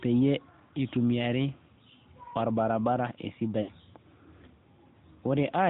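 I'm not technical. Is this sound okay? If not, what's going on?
No. An AMR narrowband mobile codec runs through the whole clip. This is the older phone-call format, which keeps nothing above 4 kHz and rebuilds each short slice of speech from a simple model of the throat and mouth. That model is being squeezed enough here that the voice sounds muffled and boxy, with a noticeable buzzy, synthetic edge. Crisp sounds such as s and f lose their sharpness.

There are lost AMR speech frames from 3.62 to 3.70 s, a gap of about 60 ms, which fits roughly three lost frames. When the radio signal corrupted that stretch of speech, the phone couldn't use it. Instead it guessed by repeating the last good pitch and mouth shape at falling volume. You hear a brief smeared, warbling dip. The speech then returns weak or rough for a moment.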